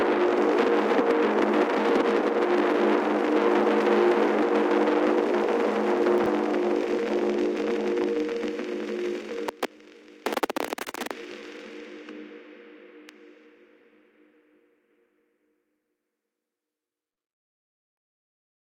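Chunks out of order occur between 6.18 and 6.26 s. A 20 ms slice of audio arrived or was written three chunks too late, so it plays after the three slices that should have followed it. No material is lost, but the sequence is scrambled. There are three hard joins where mismatched waveforms meet, so this short stretch sounds jumbled and briefly garbled.

Short concealed packet loss appears at about 17.13 to 17.19 s. Some 40 ms of the stream never reached the decoder in time. The receiver covered about 36 ms of that gap by extending the preceding sound, either repeating its pitch pattern or shaping noise to match, and then crossfaded back into the real signal. The result is a brief smeared or wobbly patch, where a short transient could be missing.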